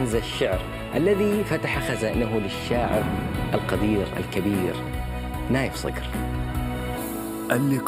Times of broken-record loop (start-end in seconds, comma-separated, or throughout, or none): none